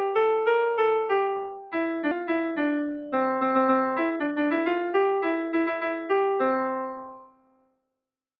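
Throughout the clip the level breathes and sustained parts thin out, swinging by about 5 dB: a noise suppressor meant for speech was applied to music or sounds and treats held tones as noise. From 1.44 to 1.75 s the sound sinks by as much as about 12 dB. This is sound cut by the noise suppressor, which pulled down this stretch harder than its surroundings. Around 2.11 to 2.13 s the audio jumps forward with no gap. This skip ahead drops roughly a second of audio and splices the two sides almost directly. From 2.21 to 6.14 s everything runs hurried at 114% speed with unchanged pitch. In this jitter buffer speed-up, the receiver trimmed short pitch-period pieces, about half a second in all, to reduce accumulated delay. From 7.06 to 7.89 s the sound is pushed down again, by up to about 21 dB: the noise suppressor cut this sound too.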